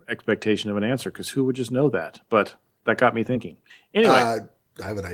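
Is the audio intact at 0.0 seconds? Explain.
Yes, the audio is intact at 0.0 seconds, with no audible fault at that moment.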